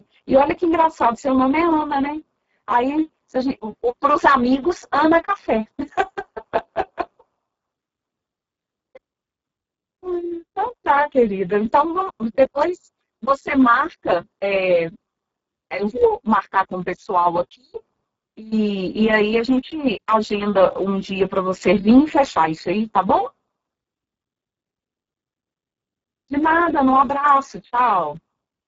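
From start to finish the speech carries heavy Speex codec damage. At roughly 6 kbps the CELP coder has too few bits to model the excitation, so voices come out hoarse, noisy and partly robotic. Nothing sounds above about 7.6 kHz.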